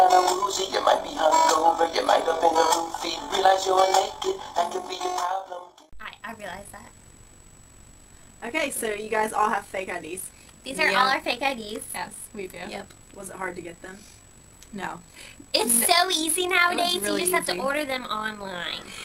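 Overlap-add ripple runs through the whole clip: the audio was split into windowed frames and rejoined with an overlap whose gains don't sum evenly, so the level dips and swells by about 6 dB once per frame, around 50 times a second, heard as a rough, robotic flutter.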